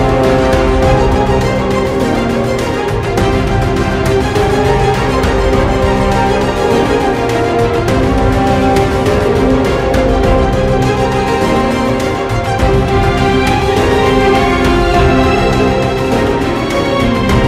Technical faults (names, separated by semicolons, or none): none